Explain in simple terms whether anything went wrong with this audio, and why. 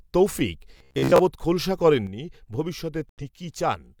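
Three things go wrong in this speech clip.

From 0.77 to 1.19 s there is robotic sound from repeated short buffers. The speech turns into a stiff, metallic buzz near 67 Hz. Most of that stretch is likely tiny slices of about 15 ms being replayed while fresh audio goes missing.

From 2.07 s to the end, one channel drops out. The sound suddenly gets noticeably quieter, to roughly half its level. A lost stereo channel is the likely cause.

From 3.09 to 3.22 s there is a digital broadcast dropout. The sound cuts to silence for about 85 ms, then comes back. The receiver lost good data, which fits two missing frames, and muted until it recovered.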